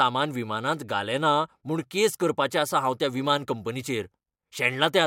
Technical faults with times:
none

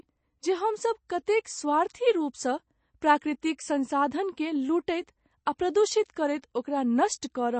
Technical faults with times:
0.00-7.59 MP3 compression

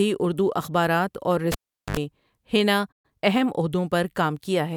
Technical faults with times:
1.52-1.97 cable pulled and plugged in
2.91-3.05 playback stall
3.05-3.29 time-compressed catch-up

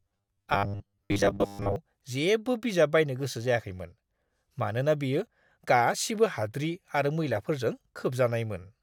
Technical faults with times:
0.01-1.76 robotic sound from repeated short buffers

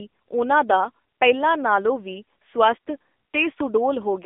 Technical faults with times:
0.00-4.25 AMR narrowband mobile codec

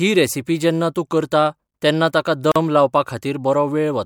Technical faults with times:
2.52-2.56 gap at a join of encoded pieces

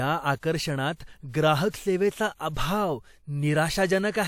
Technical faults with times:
0.38-0.43 pre-echo
1.70-1.74 pre-echo

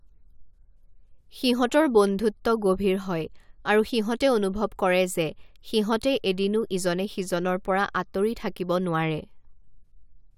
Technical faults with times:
none

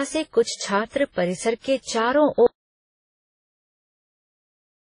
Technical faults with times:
0.00-4.94 transcoding between lossy codecs
2.46-4.94 audio dropout to silence

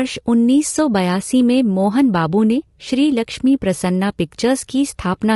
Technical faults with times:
0.00-5.35 low-delay AAC compression

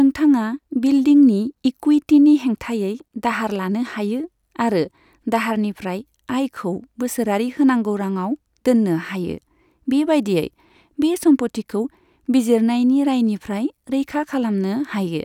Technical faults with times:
none

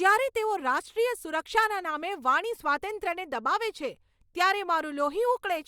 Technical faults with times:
none

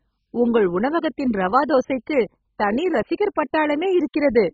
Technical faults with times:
0.00-4.54 MP2 compression

